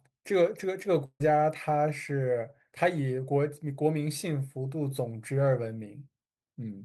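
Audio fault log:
1.05–1.22 s, burst of packet loss: roughly 140 ms of speech goes missing, papered over by the last sound held and fading, then brief silence before it picks up.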